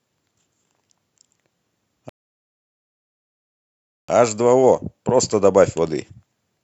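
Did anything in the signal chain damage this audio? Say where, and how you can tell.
Yes, at the playback stage: a rebuffering stall. The speech drops to silence at 2.09 s and resumes at 4.09 s exactly where it stopped, adding 1.99 s without losing content. The player exhausted its downloaded buffer and waited for more data.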